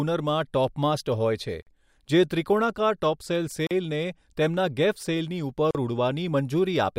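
Speech broken by three short silences, a gap at a join of encoded pieces, at 1.62 to 1.67 s (45 ms, just after "હોય છે"), 3.67 to 3.71 s (40 ms, after "ત્રિકોણાકાર ટોપસેલ") and 5.71 to 5.75 s (40 ms). They recur every 2.0 s, as separately encoded pieces joined with each run's start-up delay and end padding left in. The waveform drops to near silence with smeared edges, and the spectrogram shows a thin, slightly smeared vertical blank band before the speech resumes where it stopped.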